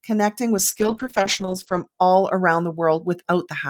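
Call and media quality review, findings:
Call bitrate drop, 0.58 to 1.93 s. Speech turns rough and muffled, top end cut near 8 kHz. Encoder rate control on bandwidth estimate. Coarse coding, fits a fall from about 64 kbps to roughly 9 kbps, lowest for about 1.2 s.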